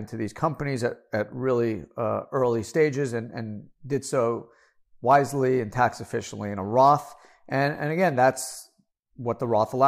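Listening closely to the speech recording, nothing stood out as a technical problem at any point.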